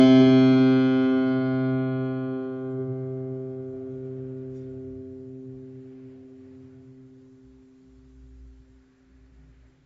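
From start to finish the music sounds dull and smeared, with nothing above 7.6 kHz, and sustained notes carry a plainly audible warbling, fizzy texture. That points to AAC compression, likely AAC-LC at a low rate that fits about 24 kbps. Short of bits, the encoder drops the top of the spectrum, quantises what remains coarsely against its hearing model, and leaves gaps between bands, which smears detail and makes held tones waver.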